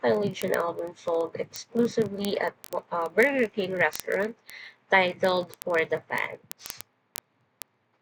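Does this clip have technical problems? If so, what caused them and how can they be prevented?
Yes. Word clock ticks run through the speech from 0.10 s to 7.99 s. They come about every 20 ms, roughly fifty a second, and sound sharp and uneven in strength. The receiving device is running on its own clock, not locked to the sender's. The two clocks differ by around 0.1 percent. Each time they slip past each other, one sample is dropped or repeated. To prevent this, lock the receiver to the incoming digital signal or a shared word clock.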